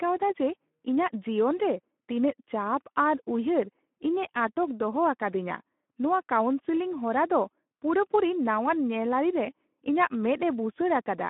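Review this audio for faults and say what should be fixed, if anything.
Speex codec damage runs throughout the speech. The CELP coder has too few bits for the excitation, so the speech sounds noisy and hoarse, which fits a rate near 11 kbps. The band sits at 200 Hz to 3.5 kHz, with nothing above 3.8 kHz. To prevent this, capture over a wideband path using a modern codec such as Opus at a higher bitrate.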